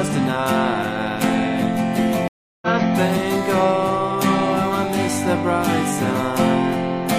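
At 2.28 s the audio cuts to silence for about a third of a second, resuming at 2.68 s roughly 0.2 s further on, so a short stretch is skipped. This is a stream reconnect: the connection dropped, and the player rejoined the live stream with a fresh decoder.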